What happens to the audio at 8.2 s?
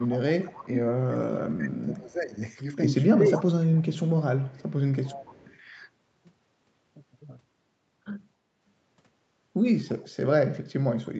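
At 8.2 s the speech carries on intact, with nothing breaking up, dropping out or distorting at that moment.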